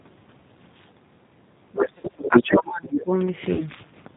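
The whole thing runs through the G.729 codec at 8 kbit/s, so it's band-limited to 4 kHz with a plainly rough, synthetic edge. From 1.65 to 3.12 s the talker keeps dipping, with speech suppressed in double talk, likely the echo canceller ducking everything, at worst by about 20 dB, and about a second in total gets hit. Inside that, from 1.85 to 2.59 s, the other side's voice leaks through, a bit louder than the talker, and a softer scrap returns at 2.93 to 3.02 s. The echo canceller likely isn't clearing the loudspeaker signal from the mic. At 1.98 to 2.08 s there's VoIP packet loss concealed by the speech codec. About 60 ms goes missing, which fits two dropped packets, and the decoder fills it with a fading extrapolation, a buzzy tone or coloured noise. The same kind of 60 ms gap happens again at 3.53 to 3.63 s, with a weak, smeared recovery afterwards.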